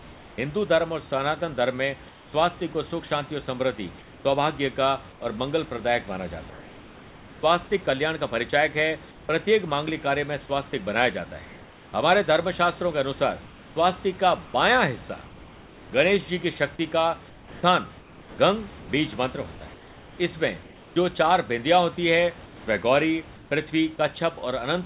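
From 0.00 to 0.38 s, 2.09 to 2.33 s, 5.12 to 7.43 s, 9.11 to 9.29 s, 11.45 to 11.93 s, 13.46 to 15.92 s, 17.30 to 20.96 s and 22.46 to 23.51 s, the speech pauses carry comfort noise in place of the background. The room's textured noise gives way to a flat, featureless hiss, about 2 to 3 dB quieter where measurable, likely from discontinuous transmission with synthetic noise filled in at the receiver.

At 9.89 to 9.91 s a loud pop cuts through, a single sharp transient peaking a few dB above the speech, likely from a brief voltage step or driver glitch, with the sound carrying on underneath.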